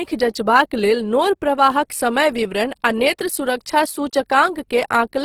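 From start to finish the speech has a grainy, rough texture, with the upper range filled in by hissy, noisy detail rather than clean tone. That's likely Opus compression in its music mode, starved at something near 16 kbps, keeping full bandwidth but patching bands with noise.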